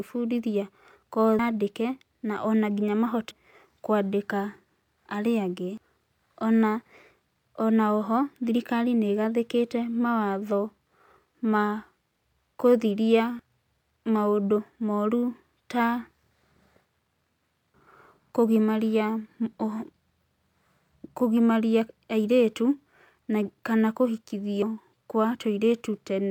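Damaged data in a compressed stream leaves the decoder unable to read a few frames correctly, so it briefly loses sync before locking onto the next valid frame header. In this speech clip that happens five times, at 1.39 s, at 3.31 s just after "na ona nginya", then at 5.84 s, 13.39 s and 24.62 s. Each break lasts only about 4 ms and is heard as a tiny chirp or blip cutting into the speech.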